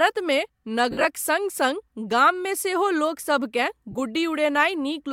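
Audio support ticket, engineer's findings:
Noisy smeared patches in the speech at 0.91–1.05 s (about 98 ms lost across 135 ms, longest gap around 50 ms) and 3.91–3.95 s. Lost LE Audio frames: LC3 concealment replays the last spectrum with random signs.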